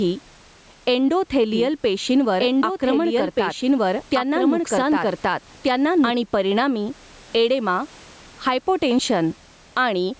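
From the start and throughout the speech there is gain pumping, with a swing of roughly 10 dB. The likely cause is gain set far too high into a fast limiter. A waveform shows a flattened, squashed envelope with the quiet floor rising between phrases.

From 1.53 s to 6.11 s a doubled audio track runs underneath, likely from a slower second capture path. A full-band copy at about the same level trails roughly 1.5 s behind. It starts and stops abruptly with no reverberant tail, ending just before "परिणामी एडेमा". A spectrogram shows the same harmonic patterns repeated 1.5 s later.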